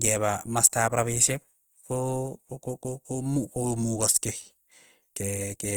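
Throughout the speech, the sound is grainy and rough, with noise filling the spectrum instead of MP3's swirling gaps. The treble still reaches 20.2 kHz. This is likely Opus compression in CELT mode, pointing to around 24 kbps.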